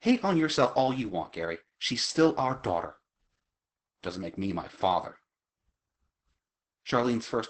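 Across the whole clip the speech carries Opus voice compression at heavy damage. The band stops at about 8.6 kHz, which points to the SILK coder's wideband mode, and the texture fits a bitrate near 10 kbps. At that rate the excitation is coded coarsely, so the speech sounds muffled, hoarse and faintly robotic. A plain low-pass filter would only dull the top, leaving the speech smooth, whereas this adds a rough, buzzy grain to the speech itself.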